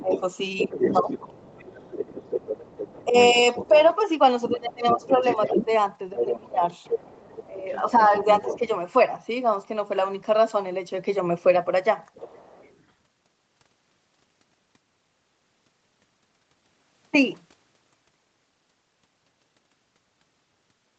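From the very start to about 1.12 s the talker's level sags and parts of the sound drop out, by around 15 dB at the deepest and for about 0.4 s in total. This is speech suppressed in double talk, likely caused by an echo canceller that could not tell the near talker from loudspeaker echo while both sides spoke and so turned everything down. From 0.11 s to 8.68 s a second, quieter voice runs underneath, roughly 10 dB below the talker. It sounds like the other side's voice leaking through, likely because the device's loudspeaker output was not fully cancelled from the microphone. While that leak continues, the suppression returns between 3.04 s and 8.64 s, with the same kind of dips down to about 15 dB, adding up to around a second and a half of held-down or broken-up speech. A brief, much fainter trace of the far voice, about 30 dB down, is heard again from 12.15 s to 12.8 s, consistent with the same incomplete echo cancellation. 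Across the clip nothing reaches above 8 kHz, as expected from the call's Opus coding.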